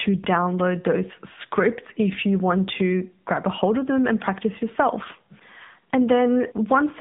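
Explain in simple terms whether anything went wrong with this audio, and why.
The whole thing, from the first second to the last, sounds like it came through a phone call: the speech has passed through an AMR narrowband mobile codec, the kind older mobile networks use. Nothing above about 3.8 kHz survives, so the voice sits in a narrow 150 Hz to 3.7 kHz band and loses its airy top. The codec rebuilds speech from a rough model of the mouth and throat, which leaves it plainly buzzy and a bit synthetic.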